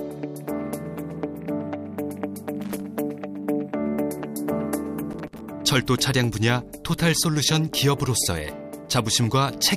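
Loose connector crackle bursts in at 2.57 to 2.82 s and 5.11 to 5.41 s: a worn contact chopping the signal, heard as scratchy crackle, seen as ragged waveform spikes and broadband vertical streaks.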